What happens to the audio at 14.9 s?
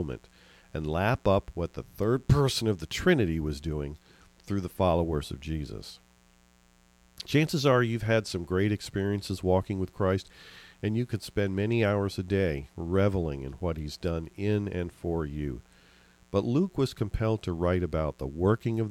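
Sharp switching spikes from the 60 Hz mains supply are leaking into the signal path twice per cycle, so at 14.9 s, as throughout the clip, a steady raspy mains buzz rich in harmonics sits roughly 35 dB beneath the speech.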